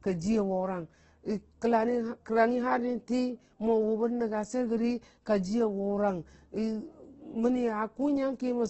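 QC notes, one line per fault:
Throughout, Opus compression: grainy, noisy roughness, likely a music-mode encode near 12 kbps noise-filling bands; spectrogram shows speckled texture and nothing above 8.2 kHz.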